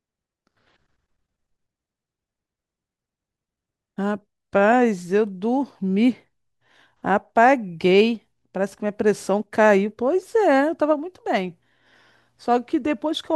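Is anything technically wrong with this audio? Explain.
No, there are no faults.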